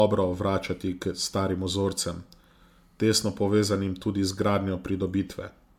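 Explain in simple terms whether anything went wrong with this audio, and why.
Yes, something went wrong, and it runs the whole way through: the speech sounds swirly, hollow and a bit smeared, with soft starts to sounds. That's generation loss, likely from being saved as MP3 about five times over, each pass adding fresh damage.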